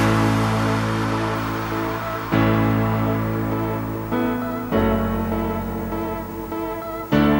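From 1.35 s to the end, a video or display buzz creeps in: a 50 Hz field-rate buzz with hash on top and a thin 15.6 kHz line whine, roughly 20 dB down.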